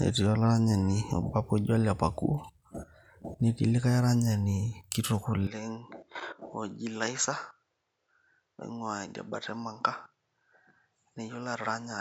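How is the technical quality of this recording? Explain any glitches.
The recording has one clear glitch, so the quality is not consistent from start to finish. At 5.47 s, right after "likai aranyani kitok", the speech turns duller and quieter and stays that way to the end. This is most likely an input switched to a poorer device, with nothing getting through above 7.6 kHz. The new microphone also brings its own tone and faint background noise roughly 45 dB under the speech, and the level drops by around 10 dB. There's no gap at the switch. On a spectrogram the upper band goes abruptly empty above 7.6 kHz from 5.47 s onward. The waveform shrinks in height at that point.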